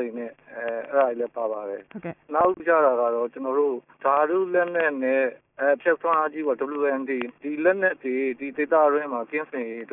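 Nothing stood out as a technical problem on listening to this audio.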